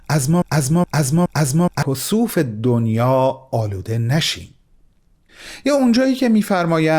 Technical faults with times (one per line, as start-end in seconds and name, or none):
0.00-1.83 broken-record loop